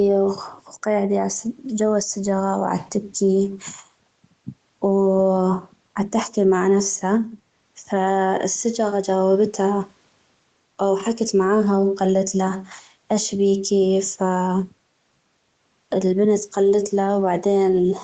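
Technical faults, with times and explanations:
No technical faults can be heard in the speech. It has passed through call microphone processing, so there is nothing above 8 kHz and the lowest bass is trimmed by the high-pass filter, as expected for that path.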